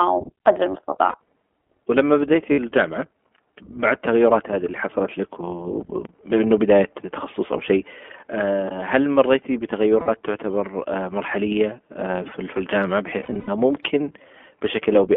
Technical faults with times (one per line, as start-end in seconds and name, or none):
0.00-15.16 iLBC codec
0.90-1.16 lost iLBC frames
2.52-2.60 lost iLBC frames
10.00-10.09 lost iLBC frames
13.20-13.50 lost iLBC frames